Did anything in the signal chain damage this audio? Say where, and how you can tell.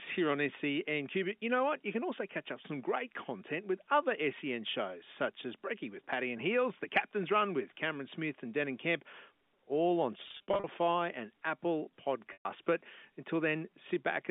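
Yes: packet loss with pitch repetition at the network stage, from 10.28 to 10.64 s just after "all on", and again from 12.33 to 12.45 s. The first stretch has about 240 ms missing, scattered across 360 ms in runs no longer than 50 ms, so it comes through as brief held, buzzy repeats. The second loses about 120 ms. In both gaps the receiver repeats the last pitch period to fill in, and the spacing fits 10 ms packets. The G.711 telephone band around them stays intact.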